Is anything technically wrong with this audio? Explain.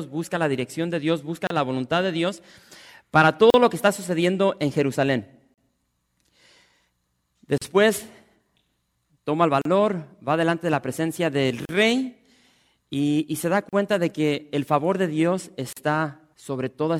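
Yes. The speech has a repeating gap at a join of encoded pieces: brief silences of about 33 ms at 1.47 s, then about 38 ms at 3.50, 5.54, 7.58, 9.62, 11.65, 13.69 and 15.73 s, roughly every 2 s. Each separately encoded segment keeps its encoder's leading delay and final-frame padding. You hear a tiny dropout before the sound resumes where it stopped. On a waveform or spectrogram, each appears as a thin vertical blank strip with slightly smeared edges.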